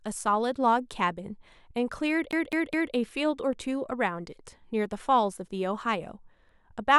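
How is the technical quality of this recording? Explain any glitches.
The speech has one clear glitch. From 2.31 to 2.94 s it shows a CD stuck on one turn: a scratch keeps throwing the laser back, so one 0.21 s slice plays three times with brief mutes between. The waveform shows three identical blocks separated by thin gaps, and the spectrogram shows matching repeated patterns.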